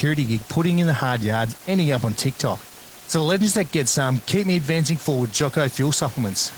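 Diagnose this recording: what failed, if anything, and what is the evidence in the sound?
The fault lies at the codec stage: Opus voice compression throughout. The speech has a hoarse, slightly robotic edge despite content reaching 20.1 kHz, and the room noise, about 21 dB down, burbles. That fits hybrid SILK-plus-CELT coding near 16 kbps, with coarse excitation.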